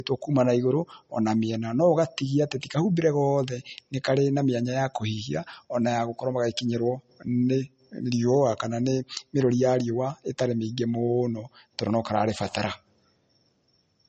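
From start to finish the speech sounds dull and closed-in, with nothing above about 8.4 kHz and a smeary, swirly edge on consonants. That's low-bitrate audio saved at a high bitrate: likely a roughly 32 kbit/s MP3 re-encoded at 320 kbit/s, which can't restore what was lost.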